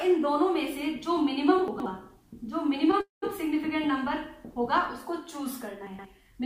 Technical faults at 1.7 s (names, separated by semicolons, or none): chunks out of order